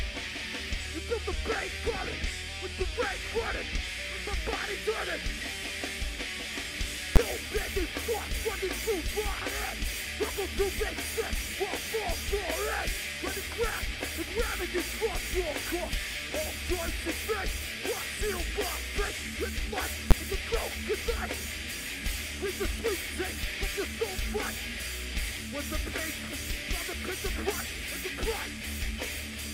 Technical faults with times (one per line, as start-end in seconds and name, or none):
7.16 invalid numbers at full scale
20.11 invalid numbers at full scale